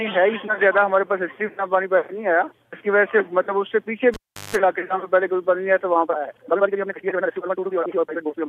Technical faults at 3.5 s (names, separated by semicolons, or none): none